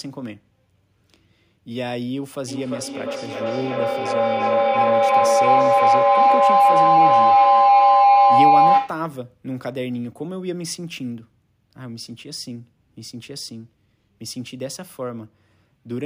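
From 2.47 s to 9.17 s, a feedback howl builds: a microphone-to-loudspeaker loop gains level each pass, narrowing to a tone near 700 Hz that pulses roughly every 300 ms and peaks about 14 dB above the speech. Spectrograms show one bright horizontal line; waveforms swell.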